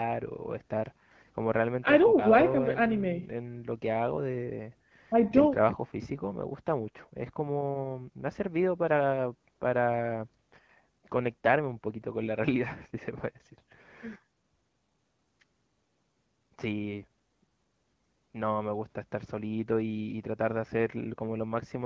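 No faults found: the speech carries the expected call microphone processing with nothing above 8 kHz, and the AMR wideband (HD Voice) codec at 12.65 kbit/s, which leaves only light coding damage.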